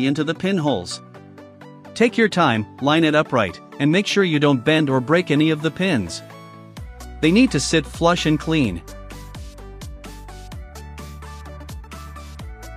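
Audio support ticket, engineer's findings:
No faults heard on this one, so there's nothing to pin on any component and the ticket can be closed as not reproduced.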